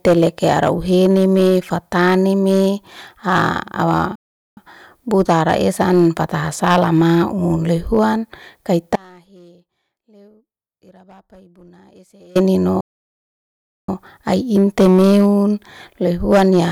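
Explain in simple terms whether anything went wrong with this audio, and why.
Several things went wrong. The whole speech clip has a rough, crackly edge on its loudest moments. This is hard clipping. The sound was pushed louder than the recording chain could carry, so the tops of the biggest waves were sliced off flat. Only a small share of the sound crosses that limit, but every peak that does is squared off, and those sharp corners produce the crackle you hear.

At 4.15 s the speech suddenly stops and stays silent until 4.57 s, a gap of about 0.41 s, then resumes with "buta ara esa'an". Later, from 12.81 s to 13.89 s, it freezes again, this time for about 1.08 s. Both are playback stalls, most likely caused by the player running short of data or being held up for a moment. The sound halts and then carries on.

From 8.96 s to 12.35 s, about 3.4 s, the speech drops out abruptly. It doesn't fall to true silence, because a very faint trace of sound is still there, far quieter than normal. 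This is an audio dropout to a faint residue. The main signal was cut off while the rest of the chain kept running, likely because of a break in the connection upstream. The change is a sudden cut, not a fade.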